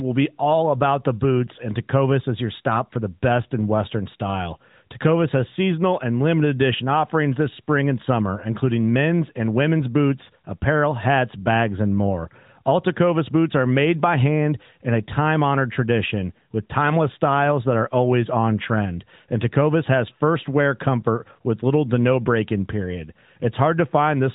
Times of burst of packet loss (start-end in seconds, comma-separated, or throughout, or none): none